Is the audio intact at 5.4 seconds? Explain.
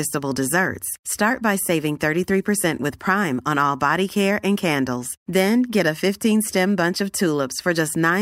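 Yes, at 5.4 seconds the speech is intact, with no dropout, click, distortion or other fault at that point.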